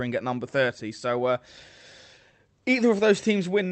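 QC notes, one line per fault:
No faults are heard anywhere in the speech. It has come through a WebRTC call path, and its top end stops at about 8 kHz, which fits the Opus codec set to that bandwidth.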